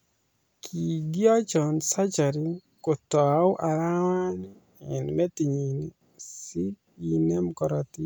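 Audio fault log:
No faults detected in the speech recording; nothing to log.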